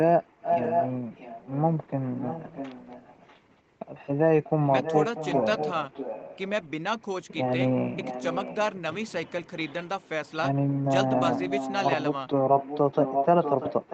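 Echo leak at 0.4–1.57 s, 2.17–3.4 s, 4.44–6.39 s, 10.01–10.32 s, 11.12–11.8 s and 12.58 s to the end: a 642 ms delayed copy of the speech, ranging from near speech level to barely audible, likely left by a far-end echo canceller.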